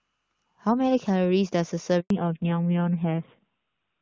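It's a speech clip, and at 2.00 s there's a handover gap: the call switched networks and about 100 ms of audio simply never arrived, so the sound drops out until 2.10 s. Right after that comes a fallback to narrowband. Everything above 4 kHz is gone through to the end, which points to a drop from HD Voice at around 23.85 kbit/s to narrowband AMR at about 7.4 kbit/s, so it goes duller and rougher. Before the switch the AMR-WB wideband sound is clean, with little or no audible codec damage.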